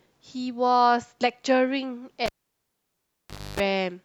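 At 2.26 s a live cable is pulled and plugged in again while the speech is running, breaking the signal path. The break gives a sharp pop, then close to silence for about 1.29 s. As the plug goes back in, only its tip makes contact at first, so the ground is missing and a 50 Hz mains buzz lasts about 0.28 s. A second pop marks full contact, and the sound returns at 3.6 s.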